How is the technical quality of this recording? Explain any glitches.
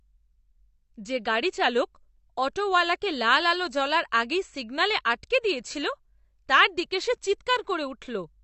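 The recording carries audible compression damage throughout the speech. Throughout, the audio was likely squeezed through AAC compression at a low bitrate, around 32 kbps judging by the damage. Nothing survives above 8.1 kHz, so the sound is dull, and coarse quantisation smears sibilants and leaves a warbling, fizzy texture on sustained sounds.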